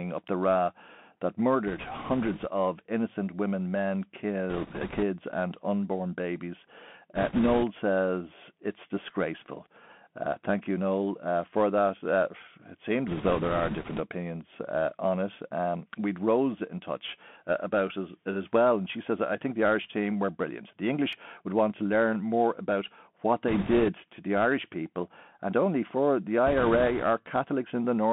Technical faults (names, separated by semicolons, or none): Bluetooth CVSD headset codec; bit errors on a Bluetooth voice link; repeated buffer